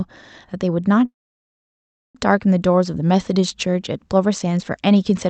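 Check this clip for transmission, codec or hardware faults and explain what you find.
One transmission fault stands out, with the call codec's band limit near 8 kHz audible throughout. From 1.05 to 2.17 s, a call audio freeze: speech stops with a brief fading buzz or hiss, then silence for about 1 s. It's likely caused by delayed packets draining the jitter buffer. Unlike a dropout, speech resumes where it paused, with nothing lost.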